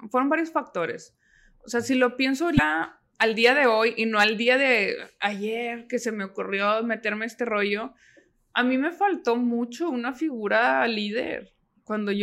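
A brief glitch breaks the speech at 2.55 to 2.59 s, after "sea si lo pienso", and again at 4.72 to 4.74 s, after "y no al día". Both come from damaged data in a compressed stream: corrupted frames knock the decoder out of sync until it finds the next valid frame.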